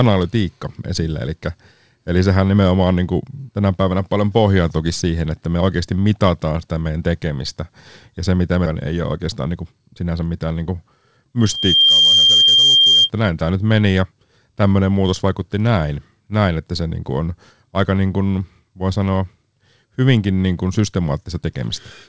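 At 8.66–8.68 s the speech jumps forward in a skip ahead: roughly 0.7 s of audio is simply gone, and the two sides are butted together with no filler, silence or smeared concealment. That absence of any gap or stretched sound is what separates it from a packet-loss dropout. The jitter buffer apparently discarded a late stretch while newer audio was already queued, so the delay fell by about the same amount in one step.

From 8.93 to 10.69 s comes a jitter buffer speed-up. The speech runs at about 112% of normal rate, so it sounds hurried, yet the pitch stays where it was. Unlike a sped-up recording, which would rise in pitch, this comes from repeatedly cutting out pieces of one or a few pitch periods, removing roughly a fifth of a second in total to bring the buffer back down toward its target depth.

From 11.4 to 13.1 s a loudspeaker feedback squeal appears: a single 3.2 kHz tone that swells over less than half a second and then sits a few dB above the speech. 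A steady interfering tone or hum would be at full level from its first instant. This one grows by itself, the sign of a microphone re-amplifying its own loudspeaker output with loop gain above one at that frequency.

Throughout, the band stops near 8 kHz, consistent with the G.722 call path.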